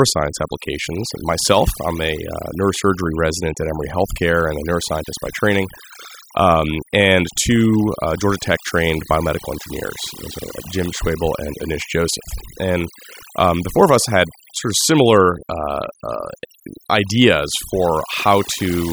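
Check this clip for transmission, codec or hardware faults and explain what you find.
The one problem here is overdone noise removal, present for the whole clip. The reducer was set so hard that any frequency band near its noise estimate gets pushed almost to nothing, taking quiet parts of the speech with it. Between phrases it's near silence with twinkling specks.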